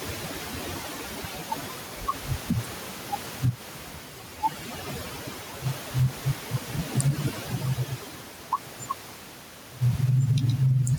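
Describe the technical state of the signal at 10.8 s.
At 10.8 s you're hearing overdone noise removal, which runs through the whole clip. The reduction is set so hard that bands near the noise floor get switched off, taking the quiet parts of the speech with them. The room noise, about 29 dB under the speech, drops and breaks up into twinkling specks.

Gain pumping is there too, across the full length. The gain swings by around 10 dB, pulling loud and soft parts closer in level, so the speech sounds squashed and flattened in level. The likely cause is gain set far too high, with a fast limiter clamping down on every peak.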